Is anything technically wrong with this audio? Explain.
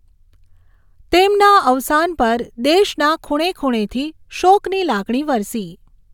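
No, the speech signal shows no technical faults that a listener can pick out.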